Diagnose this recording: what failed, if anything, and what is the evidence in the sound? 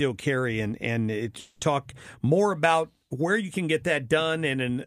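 Network stage, a likely long network dropout: after "carry and and it's" at 1.39 s, concealment buzz fills to 1.63 s, and speech resumes at "more about where you" with about 220 ms lost.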